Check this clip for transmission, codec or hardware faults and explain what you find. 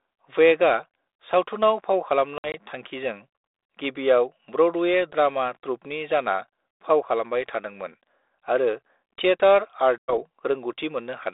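Two brief dropouts from packet loss on an ADPCM call, carried on a 32 kbit/s G.726 link limited to roughly 300 Hz to 3.7 kHz.

At 2.38 to 2.55 s, about 80 ms of packets went missing in short gaps spread over 160 ms, the longest run 60 ms. At 9.98 to 10.14 s, about 100 ms, around five packets, was lost. Each loss is filled with silence, and the decoder's adaptive predictor and step size fall out of step with the sender's. The sound cuts to hard-edged holes, then resumes slightly distorted, settling within tens of milliseconds.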